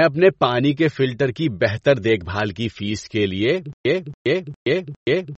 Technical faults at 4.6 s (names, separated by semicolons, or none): MP3 compression; stutter with silent gaps